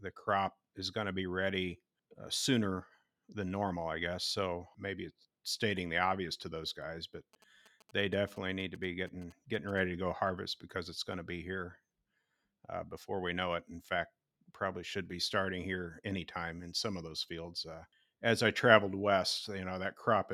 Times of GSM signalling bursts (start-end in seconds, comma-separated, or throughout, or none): 7.33-9.79